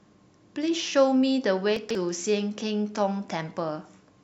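At about 1.77 to 1.95 s there's a spot of chunks out of order: one roughly 46 ms block turns up three blocks late, so nothing's missing, but the sequence is shuffled. You hear a brief jumbled stutter across the three hard joins.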